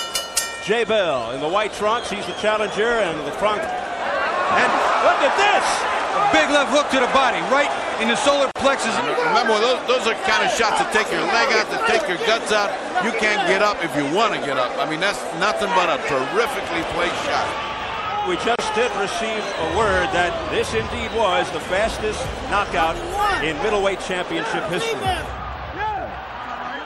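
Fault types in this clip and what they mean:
MP3 compression: watery, swirly treble and smeared attacks throughout, likely from lossy encoding at a rate fitting 64 kbps; unlike plain filtering, weak highs flicker frame to frame.
gap at a join of encoded pieces: brief silences of 42 and 31 ms at 8.51 and 18.56 s, 10 s apart; sound resumes where it stopped rather than skipping ahead.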